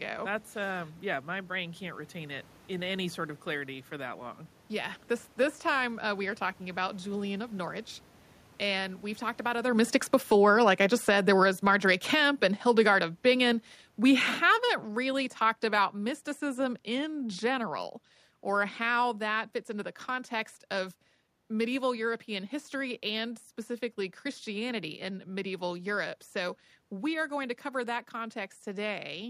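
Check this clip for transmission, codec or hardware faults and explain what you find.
One fault stands out: automatic gain falling, from 8.62 s to 19.49 s, ending just before "fits into the context". The gain control judged the input too loud, or its background noise too strong, and pulled its gain down by about 17 dB over those eleven seconds, so the speech and the room noise beneath it sink together. On a waveform the envelope tapers steadily across that span. On a spectrogram every band, including the noise floor between phrases, fades evenly. A talker shift around 9.5 s is the speaker moving, not equipment.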